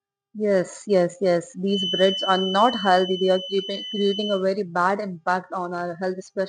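A speech clip with a feedback whistle from 1.65 to 4.45 s: a thin, steady 3 kHz tone roughly 10 dB below the speech, swelling and fading slowly in level, likely from a loudspeaker-to-microphone loop hovering at the edge of feedback. A spectrogram shows one narrow horizontal line at 3 kHz.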